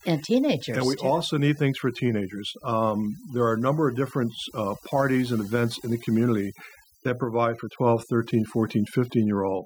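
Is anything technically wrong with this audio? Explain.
Yes. Throughout this speech there is overdone noise removal: an aggressive noise reducer mutes any frequency band near its noise estimate, taking quiet speech detail too. Pauses fall to near silence with twinkling specks. A simple noise gate would cut everything at once, without this band-by-band sparkle.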